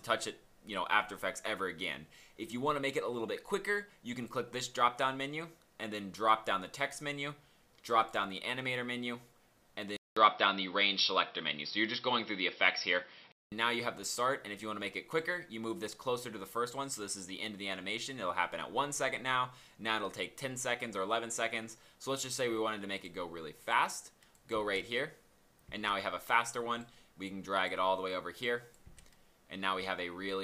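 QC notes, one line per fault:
9.97–13.52 s, input switched to a poorer device: a 0.2 s gap, then duller, boxier sound with nothing above 5.6 kHz, a level shift of roughly 5 dB and a new faint noise floor, likely another microphone. Tone, level and noise all changing together at once, unlike a plain filter or codec bandwidth drop.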